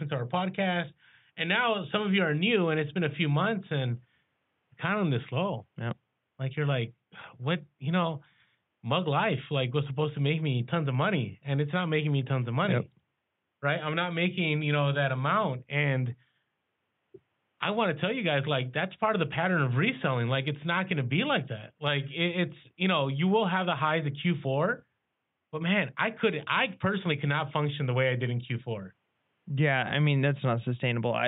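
No technical faults are audible.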